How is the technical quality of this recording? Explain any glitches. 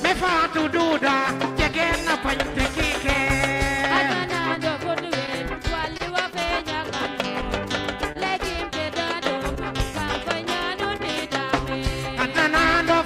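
Quality suffers from timing faults: clock drift throughout, scattered short gaps early on, and two brief stalls later.

Clock drift between sender and receiver runs the whole clip. The sender's clock is roughly one and a half percent slow, so the receiver's buffer keeps draining and patching. Small hiccups recur unevenly, showing as irregular seams in the waveform.

Scattered short gaps fall between 0.28 and 6.01 s: about ten lost or late packets, each under roughly 20 ms, concealed by continuing the previous sound. They're heard as brief ticks and smears, and a spectrogram shows thin smeared vertical slivers.

A short stall from a late packet occurs at 8.12 s (27 ms) and another at 10.96 s (25 ms). Each time the buffer ran empty and the last sound was stretched until the packet arrived. The result is a held moment with a slight buzz or dip that looks like flat, repeated texture in the spectrogram.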